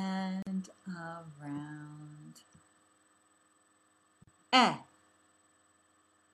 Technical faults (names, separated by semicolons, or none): gap at a join of encoded pieces